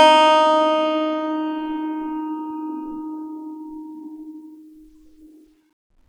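Nothing in this bit of music trips anything up, so there's no technical fault here to talk through.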